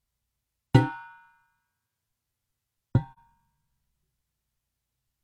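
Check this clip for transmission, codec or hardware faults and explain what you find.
One codec fault shows up in these sounds, a single short dropout.

AAC frame loss with muting, from 3.13 to 3.19 s. The decoder got no data for a stretch of about 42.7 ms, which fits one lost frame, and filled it with a zeroed spectrum. Because each frame overlaps its neighbours, the sound fades down into the gap and back up out of it rather than cutting off sharply. The result is a brief dip in level just after 3.1 s.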